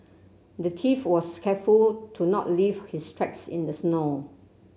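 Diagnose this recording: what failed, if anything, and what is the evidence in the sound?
Nothing in this speech recording points to a failure at any stage of the chain. No dropouts, clicks, distortion or timing disturbances can be heard anywhere in the audio.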